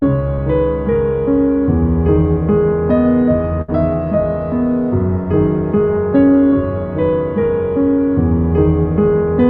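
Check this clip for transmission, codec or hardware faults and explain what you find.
Two transmission faults are audible in this music, both packet loss handled by the receiver's concealment.

From 0.35 to 0.40 s there is a short concealed packet loss. About 20 ms of audio never arrived in time, and the decoder bridged the hole with roughly 22 ms extrapolated from the preceding sound before blending back into the real signal. It is heard as a tiny smear or wobble rather than a dropout. Unlike a burst, nothing fades, and the music carries on almost unbroken.

From 3.62 to 3.70 s comes a burst of packet loss. Around 60 ms of consecutive audio was lost, so the receiver had to stretch its continuation of the last sound over about 64 ms, lowering it as the gap lengthened. The result is a brief held, fading continuation of the last sound, after which the music resumes slightly further on with that stretch missing. 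The audible decay and the skipped material set it apart from the brief glitch at 0.35 s.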